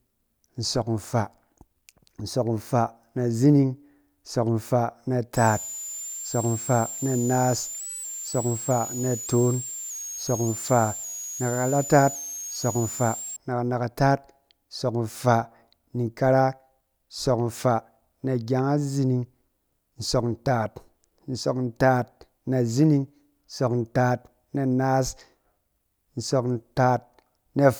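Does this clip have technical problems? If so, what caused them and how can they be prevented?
Yes. A switching supply whistle runs from 5.37 to 13.37 s, ending just before "na kanakataat nsɔk nfaa". It is a thin high tone moving between about 6.4 and 7.9 kHz, roughly 10 dB below the speech. A nearby power supply is running in an audible burst mode or beating with another supply. On a spectrogram it appears as a bright, slightly wandering line near 7 kHz across those eight seconds. To prevent it, power the recorder and microphone from batteries or a quiet linear supply, and keep chargers and adapters away from the signal path.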